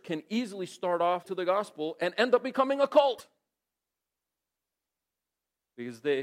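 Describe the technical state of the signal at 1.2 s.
At 1.2 s the speech hits damaged data in a compressed stream, from 1.19 to 1.26 s, between "can easily start" and "to the gospel and". Corrupted frames make the decoder lose sync, giving a brief glitch; the waveform shows an abrupt discontinuity.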